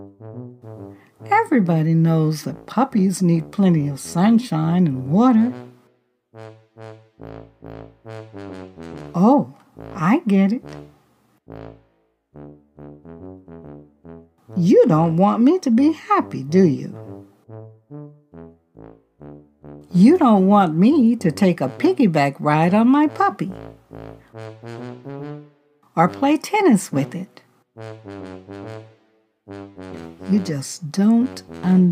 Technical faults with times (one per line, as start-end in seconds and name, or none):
none